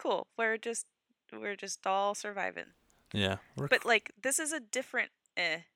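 No technical faults can be heard in this recording.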